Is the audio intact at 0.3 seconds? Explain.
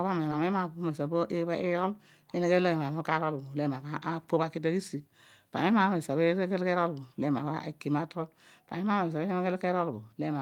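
No. At 0.31 to 0.33 s the speech skips ahead. Roughly 400 ms of audio never plays. That stretch was dropped, either in transit or by an overflowing jitter buffer, while later audio was already queued. Playback then jumps forward by about the same amount. No silence fills the break. The two sides of the cut are joined directly, so the speech lurches abruptly past a missing chunk.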